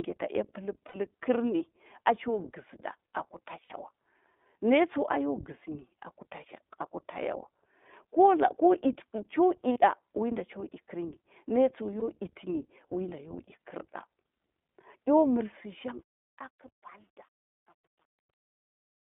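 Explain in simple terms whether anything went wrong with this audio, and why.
Yes, several things went wrong. The whole recording went through the iLBC codec, a phone-quality voice system that cuts off everything above about 3.6 kHz, so the speech sounds narrow, slightly rough and synthetic rather than just muffled.

There are lost iLBC frames at 0.88 s, 3.64 s, 9.72 s and 12.00 s, lasting 60, 60, 40 and 20 ms. Each gap is filled with a brief buzzy, held sound instead of silence, and the voice recovers immediately afterwards.

The ending fades out from about 15.4 s to 19.1 s, but it also shows truncation distortion on a fade from 15.43 s. From 16.66 s the quiet tail turns gritty. That grit comes from too little precision, not from noise or the codec.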